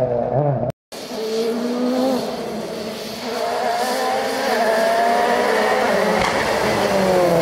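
Nothing here stands out as a technical problem, and the audio runs along without anything catching the ear.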